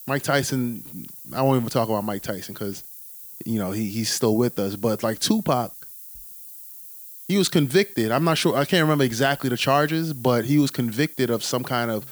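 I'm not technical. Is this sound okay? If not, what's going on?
No. Throughout the speech there is low bit depth with noise shaping: the sound is stored so coarsely (the hiss suggests about 7 bits) that rounding errors become noise, pushed upward into a steady, thin hiss, fairly loud against the speech.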